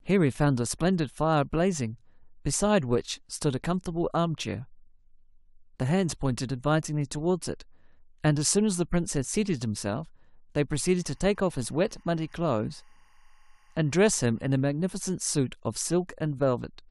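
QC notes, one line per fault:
10.76–14.73 s, timecode bleed: faint chirping warble, roughly 40 dB under the speech, from 24 fps linear timecode leaking in; spectrogram shows alternating bands near 1 kHz and 2 kHz.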